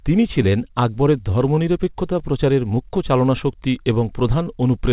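Across the whole clip the speech has a faintly uneven pace, as if it keeps catching its breath. This is clock drift between sender and receiver: the sender's clock runs about 4% slower than the receiver's, so the jitter buffer keeps draining faster than new audio arrives. The receiver has to keep padding out the stream. Through the narrow, telephone-band sound of the call path, with nothing above 4 kHz, this shows up as a loose, slightly dragging rhythm.

From 0.49 s to 4.89 s the speech plays back at about 97% speed, with small hiccups scattered at uneven intervals. These are repeated timing corrections. Each time the buffer runs low, the receiver repeats a short piece of audio to stay in step with the slow sender. All the edits stretch the audio in the same direction, and together they add roughly 150 ms. None stands out alone, but the tempo feels unsteady throughout this stretch.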